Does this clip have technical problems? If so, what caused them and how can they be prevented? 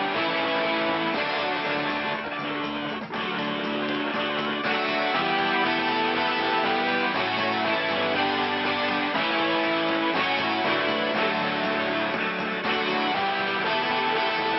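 No, nothing in this recording stands out as a technical fault, so there is no cause to trace and nothing to prevent.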